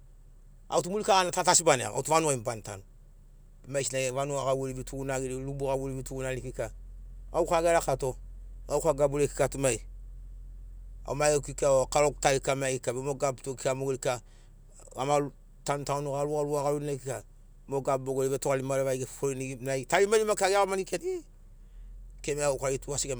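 No technical faults can be heard anywhere in the recording.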